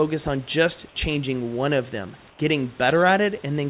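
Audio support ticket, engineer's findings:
2.30–2.39 s, right after "changing one of them": real room background drops out for 90 ms. A smoother noise about 4 dB quieter fills the gap. Likely comfort noise in place of the background: the sender's voice detector paused transmission, and the receiver synthesised noise until the sound resumed.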